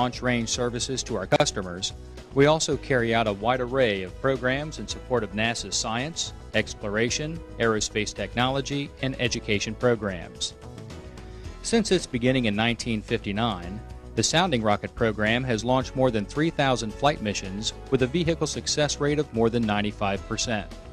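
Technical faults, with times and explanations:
1.32 to 1.40 s, chunks out of order: two 40 ms pieces of audio play swapped, with one landing a chunk late, so you get a brief jumbled stutter. Nothing's actually missing, but the order breaks at three hard joins.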